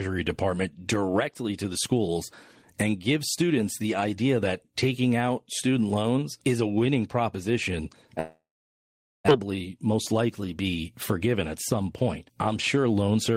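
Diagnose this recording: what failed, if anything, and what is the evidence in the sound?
Long network dropout from 8.19 to 9.31 s, right after "is a winning proposition". The last sound trails into a fading buzz, then 0.81 s of silence, and speech resumes with about a second gone. This is likely packet loss the receiver concealed, then muted.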